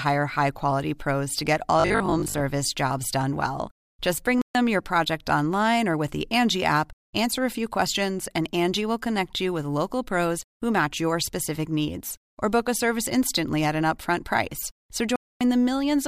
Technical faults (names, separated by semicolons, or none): robotic sound from repeated short buffers; Bluetooth stall